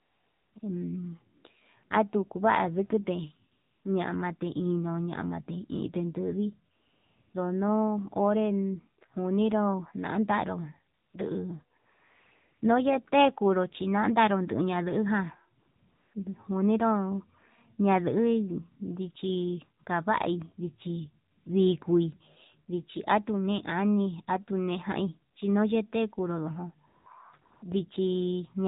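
AMR narrowband mobile codec, running through the whole clip at 7.4 kbps, confines the speech to the telephone band, with nothing above 4 kHz. At this low rate the encoder models each 5 ms of speech with a vocal-tract filter driven by only a few pulses, so the voice sounds buzzy and synthetic, and the loss of sibilance and breath detail is plainly audible throughout.

AMR comfort noise appears fourteen times between 0.00 and 27.62 s. Each time, the phone judged the talker silent and stopped sending speech frames, and the receiver filled the gap with smooth synthetic noise built from a coarse level-and-spectrum description. The gaps range from 20 ms blips to a 0.84 s stretch at 11.78 to 12.62 s. A clear example falls between "ñamate inde ndui" and "ndono onre", from 6.76 to 7.34 s, where the real background switches abruptly to steady hiss and back.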